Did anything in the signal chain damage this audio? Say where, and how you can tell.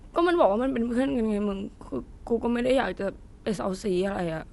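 Yes, at the codec: the speech sounds dull throughout, nothing above 11.4 kHz, with rough fluttery noise, likely Dolby Digital compression starved near 64 kbps, bands zeroed and dither-filled.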